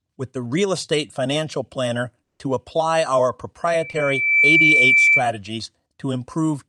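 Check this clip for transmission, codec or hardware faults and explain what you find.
Three faults turn up in this speech clip: a long gap, a feedback squeal, and a brief concealed packet loss.

From 2.23 to 2.41 s the sound stops for about 0.16 s and resumes with that stretch missing. This is likely a long network dropout, where audio failed to arrive and was never played.

From 3.67 to 5.26 s a single 2.3 kHz tone swells over roughly 0.7 s to about 10 dB above the speech. This is a loudspeaker feedback squeal, where the microphone re-amplifies its own loudspeaker output.

From 3.91 to 3.95 s there is a short smear as the receiver extends the preceding sound. This is short concealed packet loss, covering about 20 ms that reached the decoder too late.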